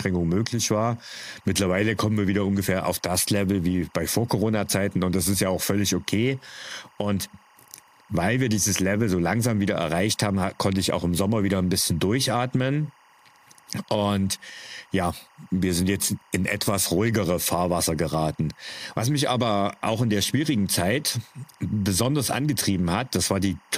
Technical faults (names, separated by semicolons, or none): timecode bleed